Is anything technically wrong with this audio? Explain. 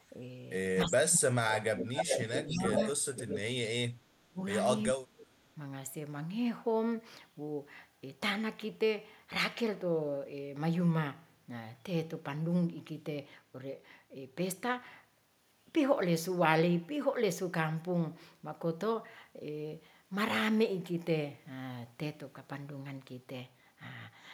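Yes, two problems. Speech suppressed in double talk at 0.85–1.45, 1.72–2.77, 3.0, 3.23–4.41 and 4.93–5.44 s: the speech dips or drops out, by up to about 35 dB, likely because an echo canceller ducked everything while both sides talked. Echo leak at 1.49–1.54, 1.77–2.9 and 3.14–3.39 s: a copy trailing 385 ms behind, sometimes nearly as loud as the speech, likely loudspeaker pickup the far-end canceller didn't fully remove.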